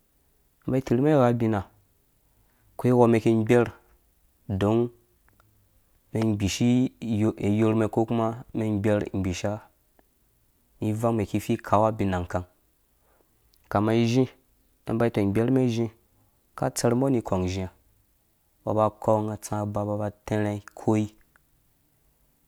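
No faults are audible here.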